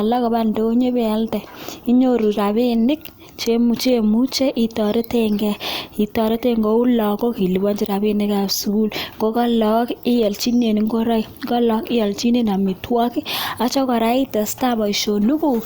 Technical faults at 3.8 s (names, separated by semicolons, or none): none